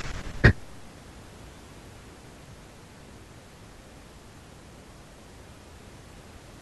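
Nothing's technically wrong with this bit of speech; the only thing underneath it is a little ordinary background noise from the room, sitting about 15 dB below the talking.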